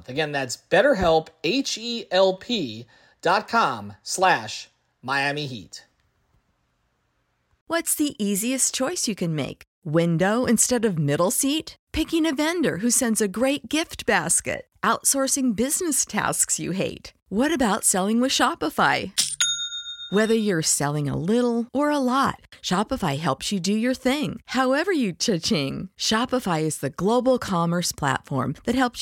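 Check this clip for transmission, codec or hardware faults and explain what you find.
No transmission, codec or hardware faults can be heard anywhere in the speech. There is nothing to report at any point in the recording.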